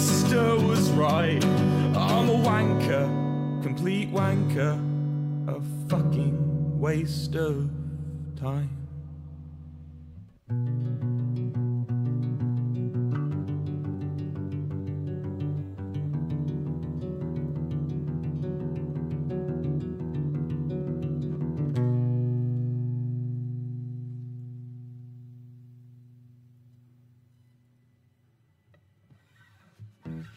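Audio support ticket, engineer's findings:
Nothing stood out on listening; no symptom to log against any component.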